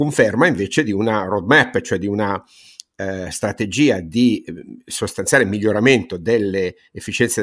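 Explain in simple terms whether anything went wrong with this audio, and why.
Nothing went wrong with this audio, because no technical fault can be heard anywhere in it.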